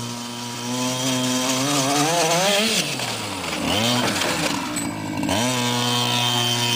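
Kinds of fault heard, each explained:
compressed frames skipped: at 5.29 s, a few whole frames, either missing or rejected by the decoder as damaged, go unplayed, so the audio jumps ahead by about 70 ms. This fits roughly three frames of about 26 ms each. The spectrogram shows a brief vertical streak at the join.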